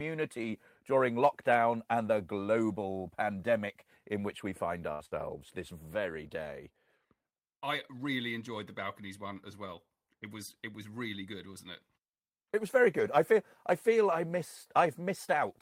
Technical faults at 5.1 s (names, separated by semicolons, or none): burst of packet loss